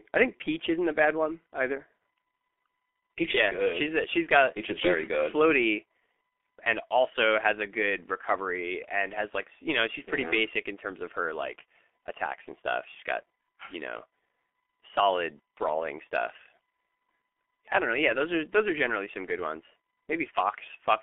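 G.723.1 codec damage runs throughout this speech clip: heavy low-rate coding, consistent with about 6 kbit/s, and a 250 Hz to 3.5 kHz band leave it muffled, hoarse and consonant-smeared.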